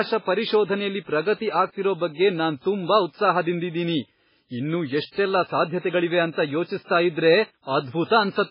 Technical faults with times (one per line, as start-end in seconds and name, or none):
0.00-8.50 MP3 compression